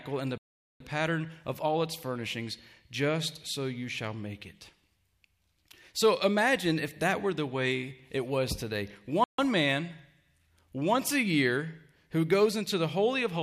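The audio drops out twice: a 0.43 s gap at 0.38 s and a shorter 0.15 s one at 9.24 s, each time cutting to silence and picking back up. That's likely a Bluetooth stall, where interference delayed packets and the headphone buffer ran empty.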